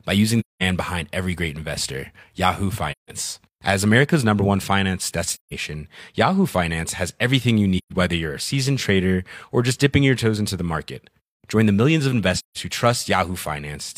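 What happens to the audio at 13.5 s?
Nothing goes wrong at 13.5 s; the speech there plays through cleanly, with no dropout, click, distortion or other fault.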